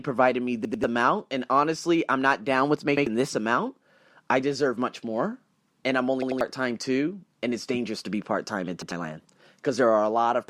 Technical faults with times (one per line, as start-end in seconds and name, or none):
0.65-0.84 repeated buffer
2.97-3.06 repeated buffer
6.22-6.41 repeated buffer
8.82-8.92 repeated buffer